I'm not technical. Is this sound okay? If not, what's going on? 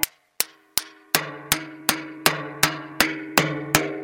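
Yes, nothing wrong can be heard in this recording of sounds.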